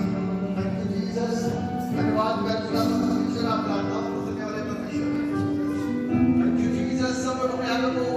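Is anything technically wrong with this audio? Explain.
Yes, there are two kinds of fault.

Dropped samples: single sharp clicks at 2.49 s, 5.15 s and 7.48 s. Each is likely a tiny gap of a fraction of a millisecond in the stream. The waveform jumps abruptly to a later value, producing a thin broadband tick with no audible loss of sound.

Repeated frames: from 3.02 s to 3.18 s, a 78.4 ms block plays three times in total, two extra plays, which fits a run of three compressed frames being resent. The result is a brief stutter, and the audio is 156.7 ms longer.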